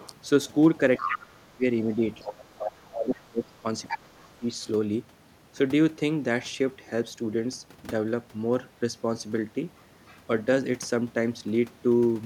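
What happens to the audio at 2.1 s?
At 2.1 s, two faults overlap. The first is speech suppressed in double talk, running from 0.99 to 2.39 s. With both ends talking at once, the echo canceller likely could not tell the near talker apart from the loudspeaker echo, so it turned everything down together. The talker's voice sinks and breaks up in patches adding up to about a second, at its deepest around 30 dB quieter.

The second is the other side's voice leaking through, from 1.92 to 2.86 s. The far end's audio, played on the talker's loudspeaker, was likely not fully removed from the microphone signal. A second voice can be heard underneath, roughly 10 dB below the main speech. It continues briefly after the suppression lifts.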